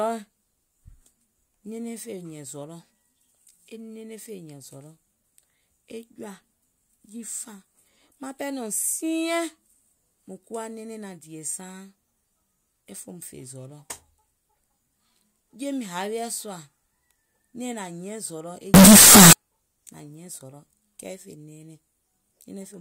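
At 18.74 s, right after "zɔlɔ̀ e", the speech turns into a blast of harsh, squared-off noise at an almost fixed, high level until 19.33 s. That's float read as integer, likely 32-bit float samples decoded as 32-bit integers, so sign and exponent bits dominate the level.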